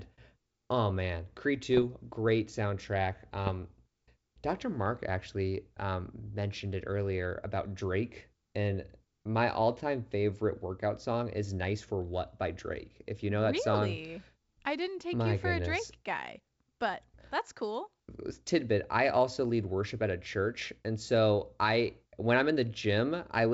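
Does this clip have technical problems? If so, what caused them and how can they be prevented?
Yes, there are bit errors on an ADPCM link at 1.74–1.86 s, just before "great soundtrack", and 3.47–3.52 s, right after it. Flipped bits knock the decoder's step size and predictor off, so each error rings on briefly as pops and rough, level-jumping bursts. Protecting the link with error correction, or muting and concealing damaged frames, prevents this.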